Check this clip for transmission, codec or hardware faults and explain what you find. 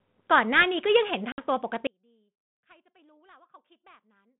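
Two faults are audible in this speech clip, both carried over a 32 kbit/s G.726 ADPCM link whose 150 Hz to 3.6 kHz band and light coding grain are present throughout.

Packet loss on an ADPCM call, 1.32 to 1.43 s: A hard-edged hole of about 60 ms cuts the speech, which then resumes slightly distorted. Roughly three packets went missing, and the decoder's predictor and step size drifted from the sender's until they resynchronised.

Audio dropout to a faint residue, from 1.87 s to the end: The speech abruptly collapses to a faint leak about 35 dB below its normal level and never returns. This is likely a lost signal feed, with the path after the break still live enough to pass that weak trace.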